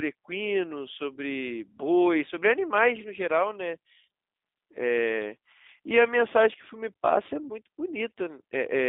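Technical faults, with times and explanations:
Throughout, G.729 codec: the speech is confined to a telephone band of roughly 250 Hz to 3.7 kHz and sounds plainly rough and synthetic, consistent with 8 kbit/s G.729A rebuilding each 10 ms frame from a vocal tract filter, pitch predictor and sparse pulses.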